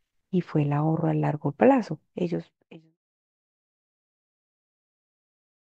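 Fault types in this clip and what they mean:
The speech signal shows no technical faults, and the level eases down in a smooth fade-out beginning around 1.5 s and ending at 2.98 s, without any click or abrupt edge.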